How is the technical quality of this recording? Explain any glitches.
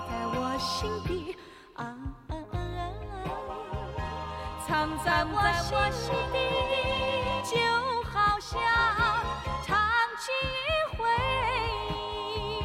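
There's one real glitch here, a doubled audio track from 4.81 to 7.41 s. A full-band copy trails the original by roughly 400 ms at about the same level, with no decay or room colour, and it cuts in and out abruptly. The likely cause is a second, slower capture path or an edit leaving two out-of-step copies mixed together.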